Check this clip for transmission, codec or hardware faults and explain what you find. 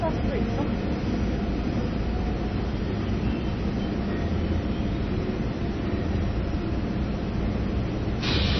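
One fault runs throughout: MP3 compression, likely at a very low bitrate, around 24 kbps. Short of bits, the encoder removes everything above 6 kHz and lets weak frequency lines flicker on and off between frames, so the sound is dull, watery and swirly, with plainly audible damage.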